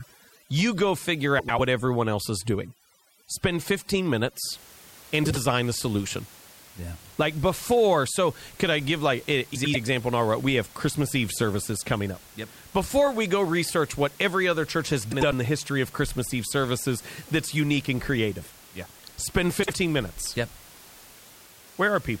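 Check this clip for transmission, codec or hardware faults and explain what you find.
Two problems show up here, one at the start and one recurring throughout. The room noise sits about 24 dB under the voice.

From 0.0 to 4.44 s there's overdone noise removal: the reducer cuts bands near its noise estimate too hard, leaving twinkly near-silence.

Frames out of order hits at 1.39–1.60, 5.25–5.37, 9.55–9.76, 15.12–15.33 and 19.63–19.74 s. Neighbouring blocks, about 96 or 48 ms long, play swapped, giving a garbled flutter.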